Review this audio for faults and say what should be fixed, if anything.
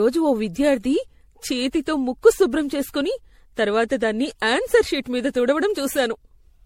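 Throughout the speech, the sound is swirly, hollow and smeared, with blurred attacks, most likely from generation loss: around seven MP3 re-encodes, fitting 64 kbit/s. A spectrogram shows a hard ceiling at 16.5 kHz with patchy holes. Prevent it by working from a lossless master and encoding only once at the end.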